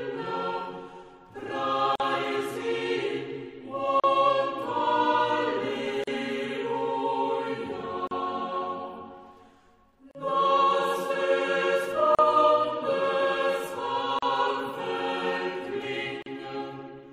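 Separately encoded pieces were joined without trimming their encoder delay and padding, leaving a gap at each join: silences of about 44 ms at 1.96 s, then about 38 ms at 4.00, 6.04, 8.07, 10.11, 12.15, 14.19 and 16.22 s.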